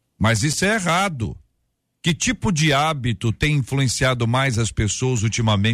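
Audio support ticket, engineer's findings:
Block of digital silence, 0.53 s, 5 ms, before "é errado": tick. Likely output buffer not filled in time. Waveform: flat near-silent run; spectrogram: vertical broadband lines at both edges.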